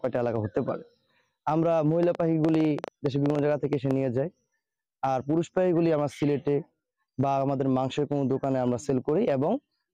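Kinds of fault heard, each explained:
Train of clicks: about fifteen sharp, irregularly spaced pops near 8.5 per second, roughly 10 dB above the sound; spectrogram shows thin vertical broadband lines, likely from interference.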